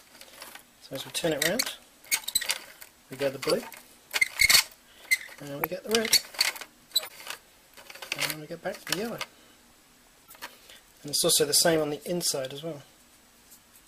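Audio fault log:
1.62 s, 3.50–3.59 s, 5.58–5.65 s, 7.03–7.11 s, 10.26–10.34 s, 11.70–11.76 s, corrupt frame decoded: damaged compressed frames were still played, so misread gains put stray energy in the wrong frequencies. This is heard as short chirps or noise bursts, each spanning a few frames and peaking from about -35 to -10 dBFS.
9.18 s, corrupt frame muted: the decoder rejected damaged frames and silence replaced them, leaving a brief, abruptly starting hole whose length suggests three short frames were lost, with timing kept.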